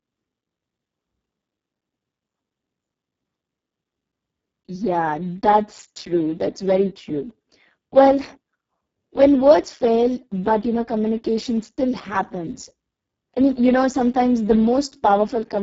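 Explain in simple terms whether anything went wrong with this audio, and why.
The speech has been squeezed hard by the Speex codec for its whole length. Starved of detail, voices turn hoarse and buzzy. Unlike ordinary background hiss, that roughness rides on the voice itself, and nothing remains above about 7.7 kHz.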